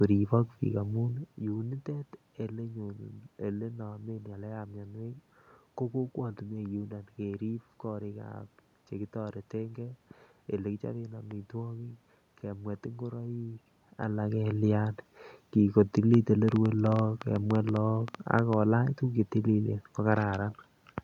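From 16.14 to 18.54 s, a train of clicks sits over the speech. About twenty sharp, similar pulses arrive unevenly, near 7.5 per second, peaking roughly 10 dB above the speech. They tick through pauses too. Electrical interference or a faulty connection or power supply is the likely cause.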